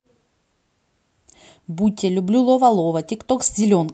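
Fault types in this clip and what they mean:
No faults present; the call path is audible only as ordinary Opus-style coding with the top end rolling off near 8 kHz, consistent with a setting around 64 kbps.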